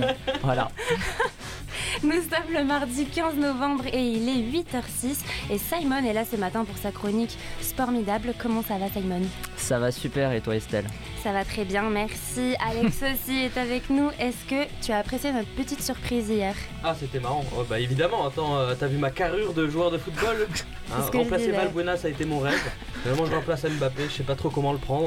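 Right near the end, from 23.14 to 23.19 s, there's a short burst of loose connector crackle: a worn or dirty contact flickering on and off, chopping the signal into a brief, ragged scratch.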